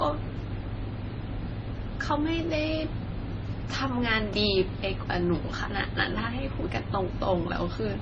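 From start to finish the speech carries a layered, smeared quality, with swirly, watery high-frequency artefacts sitting on top of a duller, grainier coarseness, and nothing at all above 9.2 kHz. This likely comes from transcoding between lossy codecs: a low-rate MP3-style encode followed by a Vorbis-style one, each adding its own damage while the lower cut-off survives. On a spectrogram, energy stops flat at 9.2 kHz, with blotchy, patchy smearing below it.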